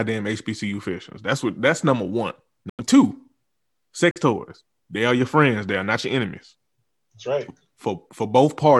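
Corrupt frames muted, twice: damaged compressed frames were rejected by the decoder and replaced with silence. Right after "what that's number one", the sound drops out abruptly from 2.70 to 2.81 s, a 110 ms hole that fits a run of about four lost frames. A shorter gap follows at 4.11 to 4.18 s, about 66 ms, consistent with a couple of frames. Both cut in sharply, and the timing is kept, so the audio resumes exactly on schedule.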